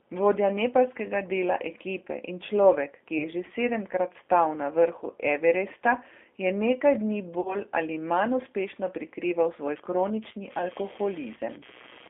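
Throughout the speech, the line runs through a G.729 codec, and the sound fits the 8 kbit/s G.729A variant. The encoder models each short frame as a vocal tract filter, a pitch predictor and a handful of pulses, so the decoder rebuilds an approximation rather than the waveform itself. The band is limited to about 250 Hz to 3.5 kHz, and the coding damage is plainly audible as a thin, slightly rough, synthetic quality on every syllable.

At 3.18 s, VoIP packet loss concealed by the speech codec occurs. About 20 ms of audio never arrives, which fits a single lost packet. The decoder fills the gap by extending its last pitch and filter at falling gain, and because each frame depends on the one before, the disturbance carries on to about 3.28 s. It sounds like a brief stretched smear, with the speech weak and slightly distorted as it recovers.

The same packet loss concealment occurs again from 7.41 s to 7.57 s, this time over about 40 ms of lost audio, which points to two consecutive packets. 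The longer extrapolation stretches the last sound into a fading tone or coloured noise. The speech then takes a moment to regain its normal strength and clarity.

From 9.76 s to the end of the clip, computer activity noise appears. Changing load in the computer disturbs the ground shared with the audio circuit and injects an electrical signal that has nothing to do with the speech. It is heard as a pulse train repeating at around 150 Hz, roughly 25 dB below the speech, and it follows the machine's activity rather than the talker.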